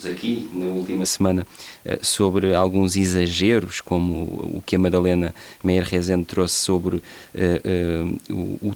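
From the start until 1.04 s, the speech sounds roomy, hollow and thin, about 5 dB quieter and noisier, likely a switch to a distant microphone.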